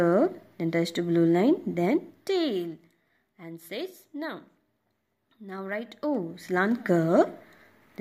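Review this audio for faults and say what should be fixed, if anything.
The gain control is applying level changes in coarse 2 dB jumps with no smoothing between them, causing zipper noise. From 1.79 to 3.05 s the level drops by about 15 dB, and from 5.51 to 6.91 s it rises by about the same amount. Each jump, arriving at about seven a second, leaves a small click, so the moves ride on a ticking rasp. Interpolate gain per sample or ramp each step across the buffer to prevent it.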